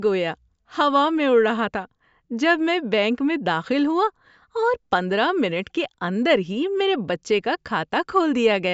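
No technical faults are audible.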